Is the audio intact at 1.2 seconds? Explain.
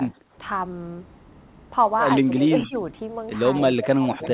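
Yes, the speech at 1.2 seconds is intact, with nothing there beyond the ordinary narrowband sound of a call path that carries nothing above about 4 kHz.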